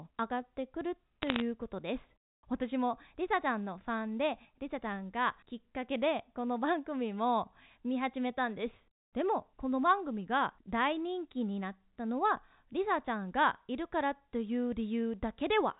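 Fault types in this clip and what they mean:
Bit errors on a digital phone line: Between about 1.22 and 1.41 s, a short burst of sharp ticks and crackle sits over the speech. Each tick is one corrupted sample on the G.711 line. A flipped high-order bit, or a flipped sign bit on a loud sample, throws that sample far from its true value. The speech itself stays intact beneath the crackle. The density suggests an error rate well under one percent, concentrated in this brief stretch of the 64 kbps telephone stream.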